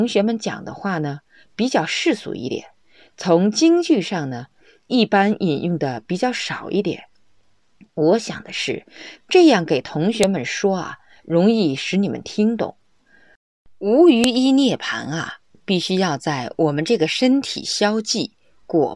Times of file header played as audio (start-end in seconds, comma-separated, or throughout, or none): 10.23, 14.24